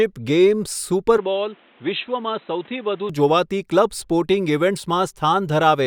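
From 1.17 s to 3.10 s the speech abruptly turns dull and boxy, with nothing above 4 kHz, drops roughly 5 dB, and gains a new faint background noise, most likely an input switched to a poorer device. The simultaneous change in bandwidth, level and noise floor, with no gap at either switch, distinguishes it from a simple filter.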